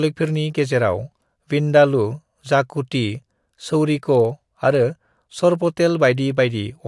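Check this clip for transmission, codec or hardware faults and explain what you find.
One fault runs throughout the speech: the resampler restarted on every block. Each 50 ms block was converted from 48 kHz to 24 kHz separately, leaving an edge error that ticks at 20 Hz. Unlike mains hum, it vanishes in silence.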